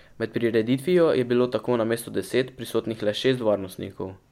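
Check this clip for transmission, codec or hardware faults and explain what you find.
No faults found; nothing in the speech points to a problem anywhere in the signal chain.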